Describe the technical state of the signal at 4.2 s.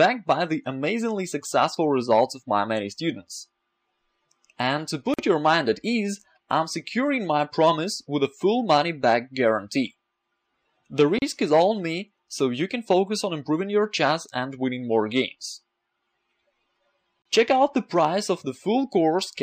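At 4.2 s the signal is intact, with no audible fault at that point.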